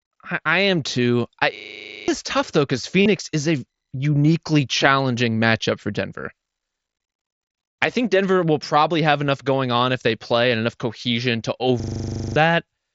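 At 1.56 s, right after "I am too I", a steady 25 Hz buzz takes over until 2.08 s, with the same 40 ms fragment repeating about thirteen times before "tough though because" picks up. It happens again at 11.80 s after "and enough cohesion to", running to 12.36 s with about fourteen repeats. Each is a system hang loop: the computer or driver stalled while the audio hardware kept replaying one 40 ms ring buffer, and roughly half a second of real audio never arrived.

Between 3.02 and 3.06 s, after "tough though because" and before "is a uniquely challenging", a brief buzzy sustained tone replaces the speech at full level, with a slight warble as the real signal resumes. A second, much shorter instance at 9.28 s is barely noticeable. Both are concealed Bluetooth headset packet loss. Voice packets from the headset were dropped, about 37.5 ms in the first case and 7.5 ms in the second, and the receiver filled each gap by repeating the closest-matching piece of the waveform just before it. 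The wideband mSBC link carries the rest of the audio.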